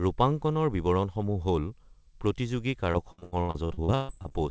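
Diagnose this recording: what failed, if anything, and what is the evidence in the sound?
Repeated packet loss (robotic sound) at the network stage, 2.92 to 4.32 s: about a dozen gaps, the longest 142 ms. Each gap is patched by extending the preceding sound, so roughly 43% of that stretch turns choppy. Steady codec colouring would persist throughout, but this is confined to one stretch.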